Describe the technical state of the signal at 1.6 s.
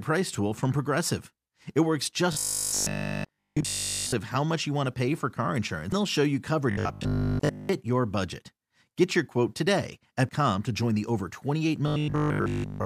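At 1.6 s the speech signal is intact, with no audible technical fault at that moment.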